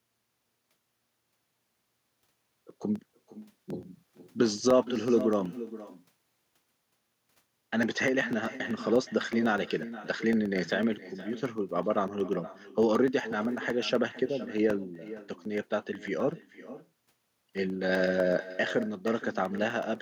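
From the start, the speech carries an echo with no canceller. The far end's loudspeaker is feeding its microphone, and nothing strips that path out. So every phrase returns roughly half a second later, about 14 dB below the direct sound, and thinner. The delay matches a full network round trip, and at that spacing the echo is heard as a distinct trailing copy rather than as room colour.

Running from 0.08 s to 19.95 s are periodic USB or driver dropouts, one every 0.125 s, eight per second. At each one, something on the host side stalls the audio stream and a sliver of roughly a millisecond is replaced by silence. The gaps come at a steady rate and register as an even ticking. They are audible only while sound is present and vanish into the quiet between phrases.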